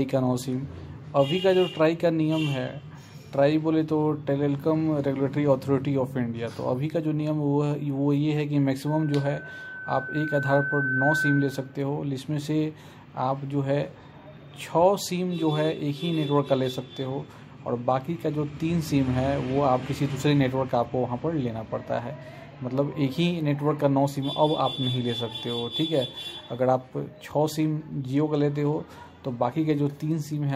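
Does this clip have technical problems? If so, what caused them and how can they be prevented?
Yes. A loudspeaker feedback squeal runs from 8.87 to 11.78 s: a steady 1.5 kHz tone swells over about two seconds until it sits roughly 5 dB above the rest of the sound. A microphone was hearing the loudspeaker it was feeding, and at 1.5 kHz the round trip gave back more than it received, so that frequency kept reinforcing itself. It can be prevented by lowering gain, moving or aiming the microphone away from the speaker, or notching out 1.5 kHz.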